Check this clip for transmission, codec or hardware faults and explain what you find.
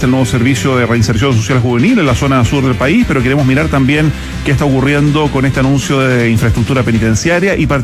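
No faults found; nothing to report.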